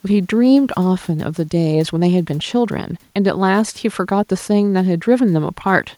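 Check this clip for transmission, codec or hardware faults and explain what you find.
No transmission, codec or hardware faults are audible in this speech; the only background is the room's own noise, sitting about 42 dB below the voice, which belongs to the recording itself.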